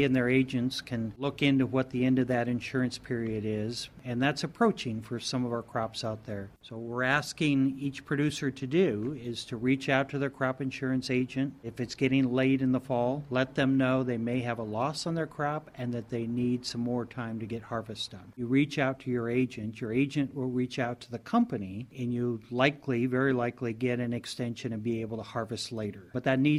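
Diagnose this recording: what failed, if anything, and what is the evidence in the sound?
Nothing in the signal chain audibly fails here: levels hold steady, the waveform carries no dropouts, clipping, glitches or distortion, and the playback timing stays continuous throughout.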